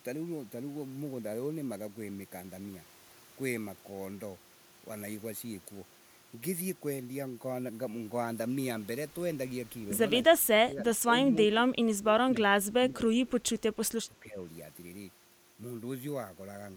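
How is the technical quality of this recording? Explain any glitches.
The recording has one recurring fault: the speech is repeatedly pushed down in the last few seconds.

Speech suppressed in double talk at 10.28–10.85, 11.31–12.3, 12.47–13.0, 13.24–13.5 and 14.07–14.42 s. An echo canceller likely ducked the talker while both sides spoke. The voice dips by about 15 to 20 dB, visible as waveform notches and faded spectrogram bands.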